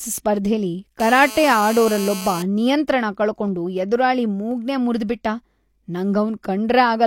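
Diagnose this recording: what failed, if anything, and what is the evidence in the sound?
A nearby 2G phone on an active call coupled radio bursts into the analogue wiring, where the audio circuit rectified them. From 1.00 to 2.43 s the speech carries a steady, raspy GSM phone buzz at about 217 Hz with dense harmonics, about 13 dB below the speech.

At the driver or buffer stage, the stream twice skipped a fraction of a millisecond of audio, most likely dropped samples. The waveform jumps abruptly to a later value, leaving a single sharp click at 3.48 s and another at 4.51 s.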